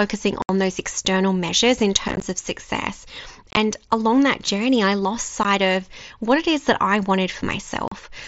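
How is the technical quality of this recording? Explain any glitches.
The speech has five dropouts from unconcealed Bluetooth headset packet loss, heard over a light grain from the mSBC headset codec.

At 0.42–0.49 s, 2.08–2.23 s, 3.51–3.57 s, 5.43 s and 7.88–7.92 s, lost headset packets were replaced by silence or an idle pattern, leaving abrupt holes. The holes at 2.08 s and 3.51 s are scattered losses, so they sound chopped and crackly.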